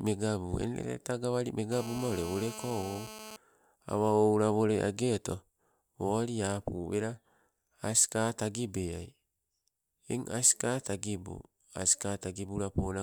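A nearby 2G phone in a call rectified into the speech audio from 1.72 to 3.36 s as GSM phone buzz, a steady, raspy 217 Hz buzz about 14 dB below the signal.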